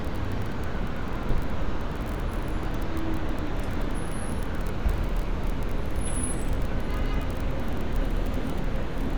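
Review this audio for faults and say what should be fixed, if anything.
No faults; nothing needs fixing.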